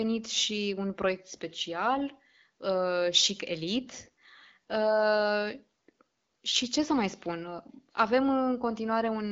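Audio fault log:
No faults found; the speech comes through an AMR wideband (HD Voice) path whose slight coding texture fits the 12.65 kbit/s mode.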